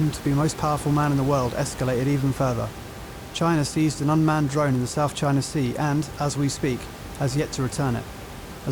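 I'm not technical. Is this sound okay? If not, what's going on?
Yes, there's nothing wrong with this recording.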